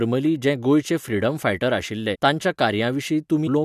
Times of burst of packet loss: none

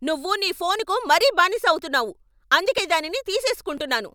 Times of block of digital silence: none

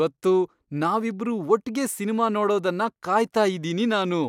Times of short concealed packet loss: none

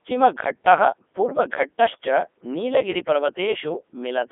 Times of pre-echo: none

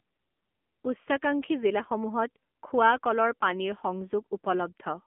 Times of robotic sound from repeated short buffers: none

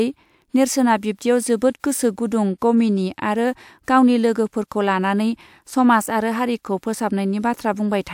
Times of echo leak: none

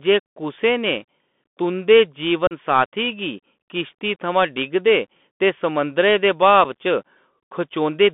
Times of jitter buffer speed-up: none

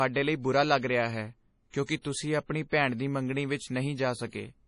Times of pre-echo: 1.70-1.74, 2.01-2.05, 4.29-4.33

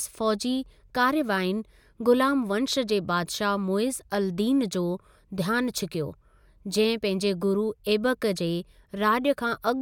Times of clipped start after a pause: none

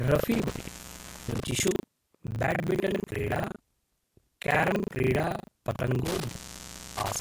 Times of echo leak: none

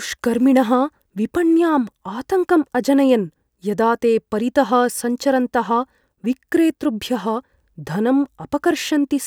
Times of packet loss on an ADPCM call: none

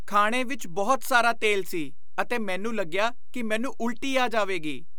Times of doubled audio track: none

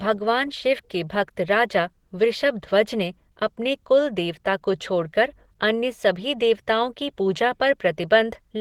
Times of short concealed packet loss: none

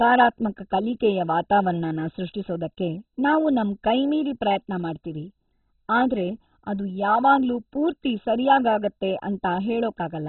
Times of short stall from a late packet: none

